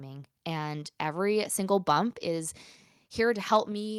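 At 2.13 s the whole speech signal, voice and background together, drops abruptly by about 2 dB, and at 3.72 s it falls again, this time by about 4 dB, leaving the tail of the clip quieter. These are microphone volume stepped down events, likely caused by the call software judging the input too hot and cutting the device's input volume in a single step each time, so the level changes instantly rather than easing down.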